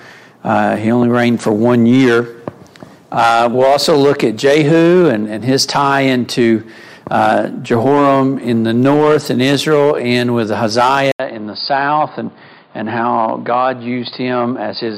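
At 11.12 s there's a short dropout, about 80 ms, and then the sound comes back noticeably duller and boxier for the rest of the clip. Nothing gets through above roughly 4.9 kHz after that point, the level sits about 5 dB lower, and a faint new noise floor appears, around 40 dB down. That combination points to the input likely being switched to a poorer device mid-recording, with a narrower band, a different tone and its own background.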